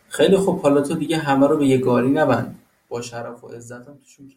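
Speech recording with no technical faults to report.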